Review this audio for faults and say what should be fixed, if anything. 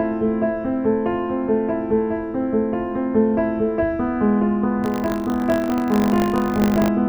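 Buffer tearing, 4.82 to 6.88 s: the write and read positions cross inside every period, splicing in a sliver of audio about 40 ms old and producing a 50 Hz buzz. To prevent it, keep the writer safely ahead of the hardware read pointer with adequate buffer headroom, and resynchronise the pointers whenever drift is detected.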